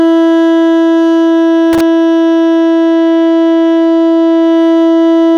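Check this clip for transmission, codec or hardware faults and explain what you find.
One hardware fault turns up in this music clip: a burst of loose connector crackle from 1.73 to 1.81 s, lasting under a tenth of a second. A worn or dirty contact somewhere in the signal path is briefly making and breaking as it shifts, so the music is chopped on and off many times in quick succession. That rapid interruption is heard as a short, irregular scratchy crackle laid over the music.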